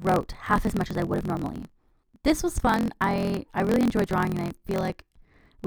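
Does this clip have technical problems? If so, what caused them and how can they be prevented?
Yes. Throughout the clip there is a block size mismatch (truncated). One stage hands on longer blocks than the next stage takes in, so the tail of every block is dropped. The buzz at about 43.1 Hz fits a reading block of 1024 samples. With a slice of audio discarded every cycle, the speech runs about 1.12 times faster than normal while keeping roughly its natural pitch, and that steady buzz sits under it the whole way. To prevent this, configure every stage in the chain to use the same block size, or place a buffer between stages that carries leftover samples into the next block instead of discarding them.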